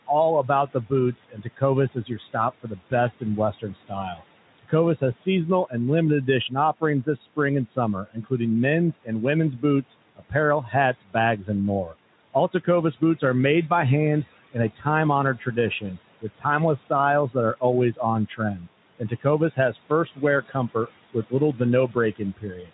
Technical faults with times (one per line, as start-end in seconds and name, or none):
0.00-22.73 noise suppressor artifacts
0.07-5.74 speech cut by the noise suppressor
6.27-8.32 speech cut by the noise suppressor
8.92-13.71 speech cut by the noise suppressor
14.52-22.73 speech cut by the noise suppressor